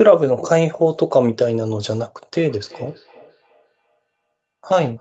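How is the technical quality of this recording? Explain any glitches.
There is one clear fault, a feedback echo between two devices, from 2.35 s to the end of the clip. A second device in the same room plays back what this microphone sent, and the microphone picks that playback up again. Its echo canceller only removes sound from its own loudspeaker, so the returning audio gets through. The speech comes back roughly every 0.3 s, faint at about 27 dB below the speech, and sounds thinner and more ringing with each pass. On a spectrogram, each syllable is trailed by weaker copies at even spacing in time. The waveform shows small, regularly spaced bursts after each louder stretch. The content stops at 8 kHz throughout, as expected from the call's normal processing and a wideband codec such as Opus.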